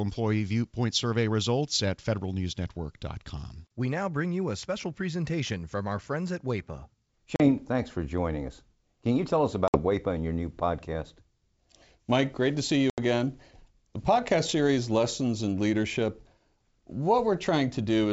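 Speech over a G.722 wideband call, clear up to about 7 kHz, breaks up three times with packet loss on an ADPCM call. There are hard silent gaps at 7.36–7.49 s (about 40 ms lost, just before "thanks for joining us"), at 9.68–9.79 s (60 ms, after "you tell us") and at 12.90–12.99 s (80 ms, after "great to see"). Unlike a plain dropout, each gap is followed by brief, slight distortion. The decoder's adaptive predictor and step size have drifted from the sender's and take tens of milliseconds to realign.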